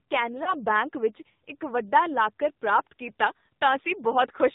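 Speech heard through the AMR narrowband mobile codec: nothing above 4 kHz, with a buzzy, synthetic edge that fits a low 7.4 kbps mode rather than a plain low-pass filter. From 0.44 to 0.54 s there is a brief warbling dip, not a silent gap, which points to a single lost AMR speech frame concealed by the decoder repeating the previous sound with falling gain.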